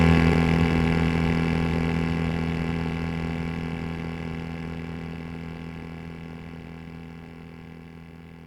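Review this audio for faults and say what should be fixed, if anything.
At 0.32 s the music has a skip ahead: roughly a third of a second of audio is missing, and playback jumps straight from the material before the cut to the material after it with no silence or fill in between. The likely cause is that a backlog of audio had built up, and the jitter buffer overflowed and discarded that stretch rather than play it late, so overall delay dropped by about the same amount at once. To prevent it, size the jitter buffer to absorb the arrival bursts and trim excess latency gradually through time-scale adjustment instead of dropping blocks of audio.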